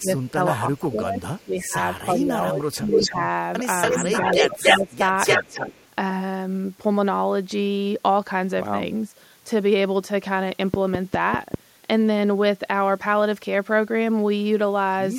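The speech drops from 0.0 to 0.1 s, by about 20 dB. From 0.29 to 1.77 s it sinks again, about 15 dB. This is speech suppressed in double talk, likely caused by an echo canceller turning down its own talker along with the loudspeaker echo. From 2.12 to 3.22 s the dip deepens to about 25 dB.

Inside that stretch, 2.9 to 3.12 s, an echo leak appears. A copy of the speech returns 283 ms late. It is strong, about 5 dB above the speech level. This is likely an uncancelled loudspeaker echo. It returns from 3.82 to 4.96 s.

From 4.45 to 5.04 s the speech is suppressed again, more mildly, about 10 dB.

From 5.26 to 5.88 s the echo leak comes back, 283 ms late and about as loud as the speech.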